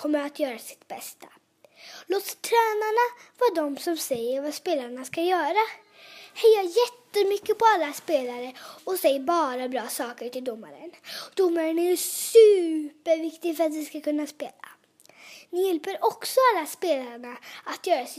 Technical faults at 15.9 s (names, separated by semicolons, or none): none